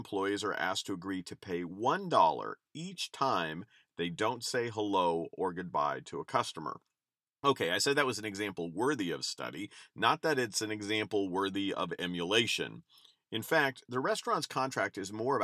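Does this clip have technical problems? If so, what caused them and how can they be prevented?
No, this clip has no technical problems, so there is nothing to prevent.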